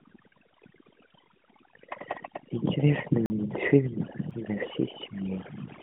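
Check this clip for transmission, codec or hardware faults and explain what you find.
Two faults are present: overdone noise removal across the whole recording, and two blocks of digital silence. The speech also carries the narrow 150 Hz to 3.5 kHz band of an AMR-NB mobile link, with nothing above 3.7 kHz and light codec colouring that fits the 12.2 kbps mode.

Overdone noise removal runs throughout. The noise suppressor was set too aggressively, so it cuts individual frequency bands whenever they sit near its noise estimate, removing the quieter parts of the speech too. The background drops and breaks up into twinkling specks.

A block of digital silence hits from 3.26 to 3.30 s, a 40 ms gap, and a much shorter one at 4.31 s, lasting about 2.5 ms. Both point to a buffer that wasn't filled in time and was output as zeros. The first is heard as a short hole and the second as a tick.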